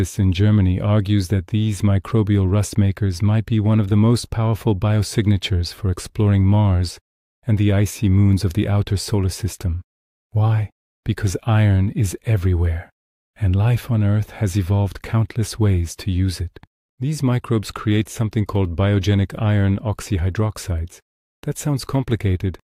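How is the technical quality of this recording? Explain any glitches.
No glitches can be heard anywhere in the recording, and the signal holds steady throughout with nothing interrupting or disturbing it.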